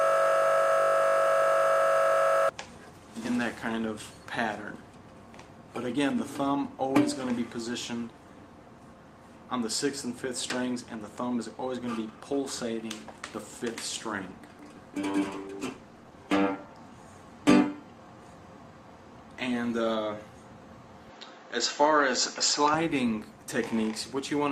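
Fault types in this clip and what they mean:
System hang loop: The system stalled while the audio hardware kept replaying the same short stretch of its ring buffer. The clip opens with the loop already under way, and it runs until about 2.49 s. A 20 ms segment repeats exactly, 124 times, so it is heard as a steady 50 Hz buzz rather than as recognisable content. The short loop length points to a small output buffer cycling with nothing new written into it.
Call bitrate drop: The call's bandwidth estimate fell, and the encoder had to code with far fewer bits. From 15.23 s to 16.83 s the sound turns coarser and rougher, with a watery, smeared texture. It stays at its worst for about 1.5 s before clearing as the rate recovers. The degradation fits a fall from around 32 kbps to 17 kbps, with the encoder quantising the spectrum much more crudely during that dip.
Input switched to a poorer device: From 21.10 s to 22.74 s the sound narrows abruptly, with nothing above 7.6 kHz, and a new background noise sits roughly 35 dB below the signal. 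There is no gap at the transition, and the level stays about the same, so the change is heard mainly as a duller tone and a different noise floor. The likely cause is the system moving capture to a lower-quality microphone or a headset call profile.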